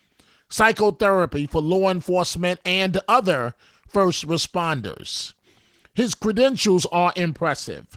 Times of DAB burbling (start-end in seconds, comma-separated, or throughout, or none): none